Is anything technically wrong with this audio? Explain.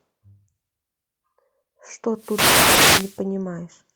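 Yes, the speech has two kinds of fault.

Short concealed packet loss occurs twice, at 1.63–1.67 s and 2.75–2.79 s. Each time about 20 ms of audio arrived too late to be decoded, and the receiver filled the gap by extending the preceding sound before crossfading back into the real signal. Each event is heard as a tiny smear or wobble. On a spectrogram, the harmonics flatten into a brief, oddly steady strip. In the waveform, there is a short repeated-looking cycle.

A wireless microphone noise hit runs from 2.14 s to 3.23 s, around the second dropout. The FM radio link faded as reflected signals cancelled, and the receiver's hiss rose into a swishing burst of static over the speech. On a spectrogram, it appears as a broadband wash of noise across most frequencies for about a second. In the waveform, the noise floor visibly thickens between the speech peaks.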